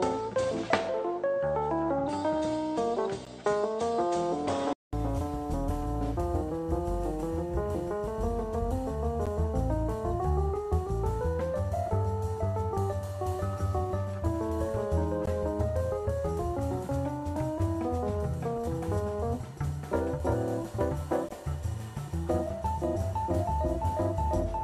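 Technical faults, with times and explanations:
0.00–4.93 s, input switched to a poorer device: Nothing above 8.9 kHz, with faint added noise about 40 dB down and an unchanged level. A 200 ms silence marks the switch. Likely a different microphone or headset profile.
15.26 s and 21.29 s, gap between stream segments: Hard-edged silences of 15.5 ms and 19 ms. Their six-second spacing fits segment boundaries where timestamps leave small holes.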